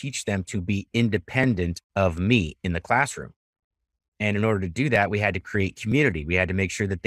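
Speech with three brief jumps at 1.44, 4.96 and 5.92 s, each a small skip of a few milliseconds, likely a dropped buffer (overrun) where the audio jumps straight ahead.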